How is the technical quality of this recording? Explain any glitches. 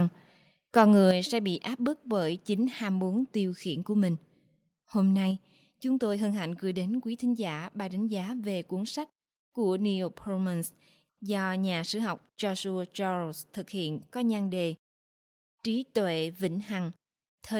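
The recording has two technical problems near the start, both affecting level rather than content.

From 0.77 to 1.11 s there's microphone overload. The loudest peaks run about 2 dB past the converter's limit, with their tops sheared flat, likely because the input volume was set too hot for the converter. Only a small share of samples clip, something like one or two percent, but it's enough to put a harsh, crackly edge on those loud syllables.

Right after that, at 1.11 s, the microphone volume is stepped down by about 6 dB, and then again at 5.31 s by about 3 dB. Each drop is instant: voice and background fall together in a single step rather than fading. The first drop lands immediately after the distorted stretch, which points to the call software likely reacting to the clipping by lowering the device's input gain.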